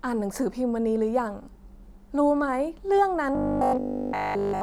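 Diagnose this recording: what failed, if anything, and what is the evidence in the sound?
From 3.35 s to 4.61 s the speech collapses into a rigid, metallic buzz at 50 Hz that still loosely tracks the words: robotic sound from repeated short buffers. The likely cause is at the driver or buffer stage, where audio arrived too seldom and a 20 ms block was replayed in place of essentially all of that stretch. A 20 ms period fixes the pitch at 50 Hz. Mains hum at 50 Hz would sit beneath the speech throughout, not replace it.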